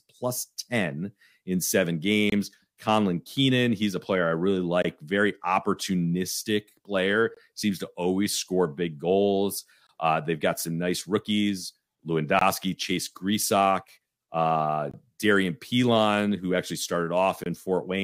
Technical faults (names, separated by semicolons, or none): gap between chunks